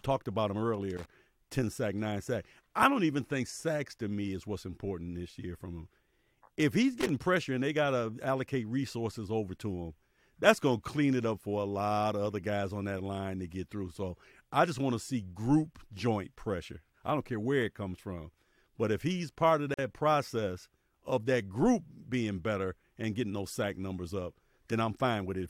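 At 0.97 to 1.06 s and again at 7.01 to 7.09 s, the speech is broken by short bursts of loose connector crackle, each lasting roughly 90 ms. A worn or dirty contact in the signal path is intermittently making and losing connection as it shifts, chopping the audio on and off in rapid, uneven succession. The result is a brief, irregular scratching texture laid over the voice, rather than a clean click.

At 19.74 s a gap at a join of encoded pieces opens in the speech, a silence of about 45 ms ending at 19.79 s. The audio was encoded as separate segments and spliced without removing the encoder's start-up delay and the padding on the final frame of the previous piece, so that dead air remains at the seam. It is heard as a sudden dropout with softened edges, after which the speech resumes exactly where it left off.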